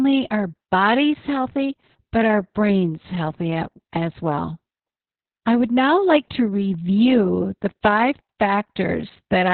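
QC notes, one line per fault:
throughout: Opus voice compression, heavy; nothing above 4.3 kHz leaves speech muffled, with hoarse, slightly robotic excitation, which fits narrowband SILK near 6 kbps.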